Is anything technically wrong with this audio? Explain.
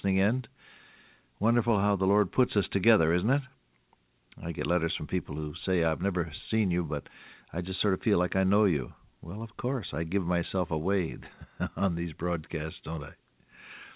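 No, nothing is technically wrong: the audio carries the expected narrowband character of a call path, with nothing above 4 kHz, which fits a G.711 mu-law codec at 64 kbps.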